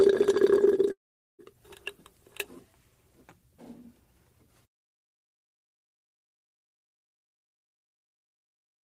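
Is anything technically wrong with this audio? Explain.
Yes. A long network dropout runs from 0.91 to 1.42 s. The sound briefly carries on as a fading buzz, then gives way to about 0.43 s of silence before resuming. The likely cause is a stretch of lost packets, with roughly half a second of audio never played and the receiver concealing the gap.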